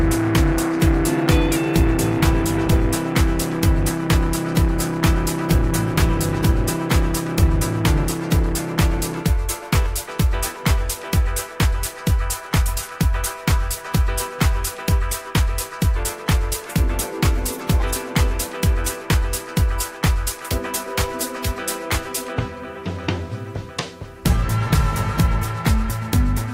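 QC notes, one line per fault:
Nothing stood out on listening.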